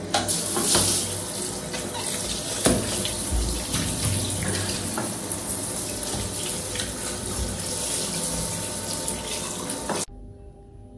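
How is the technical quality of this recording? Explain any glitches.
No glitches or technical faults can be heard here.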